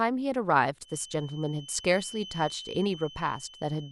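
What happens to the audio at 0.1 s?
Nothing goes wrong at 0.1 s: the speech there plays through intact, with no dropout, click, distortion or other fault.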